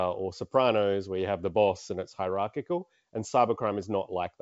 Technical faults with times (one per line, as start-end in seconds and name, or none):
none